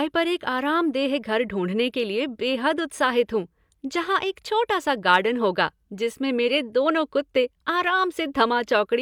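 No faults can be heard in this speech recording at any point, with nothing in the signal chain to flag.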